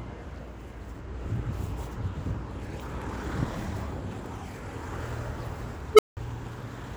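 At 5.93 s an unstable filter breaks down: a recursive filter stage goes unstable and its output grows without bound. A tone of roughly 400 Hz swells to clipping within about 55 ms, then overflows and drops to silence for about 180 ms, ending near 6.17 s.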